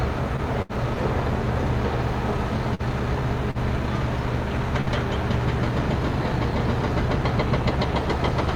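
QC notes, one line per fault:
0.36–0.79 s, repeated packet loss (robotic sound): the sound turns choppy, with small pieces dropping out. Three separate gaps, the longest 72 ms, were each patched by extending the preceding sound. About 92 ms was filled this way, 60 ms is gone, and concealment covers about 22% of the stretch.
2.75–2.82 s and 3.51–3.58 s, short stall from a late packet: the sound briefly hangs, held slightly too long with a faint buzz or dip, then carries on with nothing skipped. A late packet emptied the jitter buffer, so the last sound was stretched for 43 ms and then 38 ms until the data arrived.
4.81–4.89 s, burst of packet loss: the sound smears into a short held, fading tail and then jumps ahead. Consecutive packets never arrived in time, so the receiver continued and faded the last sound for 57 ms, and about 60 ms of the audio is missing.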